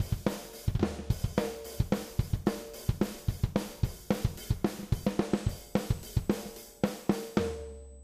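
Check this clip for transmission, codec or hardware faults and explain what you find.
One hardware fault is present. From 5.32 s to the end, a USB whine sits at a fixed 8 kHz, roughly 30 dB below the sound. The bus draws current in 125-microsecond microframes. That ripple leaks through power or ground and becomes a thin, steady high-pitched tone.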